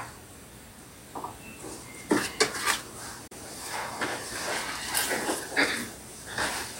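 At 3.27 s there's a digital broadcast dropout: the receiver lost a frame, which fits a single bad one failing its check, and muted. The audio fades out over about 8 ms, leaving a gap of roughly 32 ms until 3.32 s, and the missing sound never comes back.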